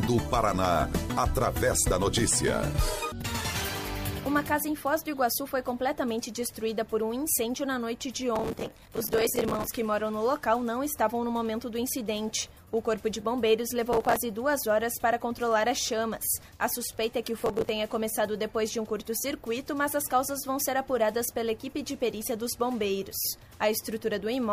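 Processor overload crackle occurs three times: from 8.36 to 9.67 s, from 13.93 to 14.16 s, and from 17.39 to 17.69 s. The processor misses buffer deadlines in quick succession, and each miss replays a scrap of stale audio with hard edges, so the sound turns gritty and tearing until the load passes. On a waveform, short repeated segments butt together at abrupt steps, spaced in a way that fits buffers of around 5 ms. A spectrogram shows dense vertical broadband streaks through each span.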